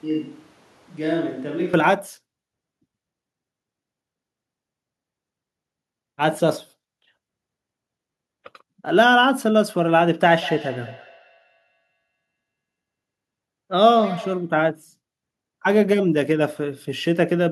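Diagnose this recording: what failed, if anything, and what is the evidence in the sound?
Switch to a distant microphone, from the very start until 1.74 s. At the capture stage, the speech is hollow and roomy, with weaker bass, a level about 5 dB below what follows, and a room noise floor around 30 dB under the speech. The likely cause is that the close microphone's feed was missing and a farther pickup was used, so reflections and ambient noise increase until the sudden return to the close source.

Feedback echo between two devices, from 10.31 s to 14.59 s. In call processing, the sound comes back at a fixed interval of roughly a fifth of a second, each repeat thinner and more ringing, the loudest about 16 dB below the direct speech. A second device in the same room is playing this microphone's signal, which is then picked up again. Each device's echo canceller removes only its own playback, so the loop goes uncancelled.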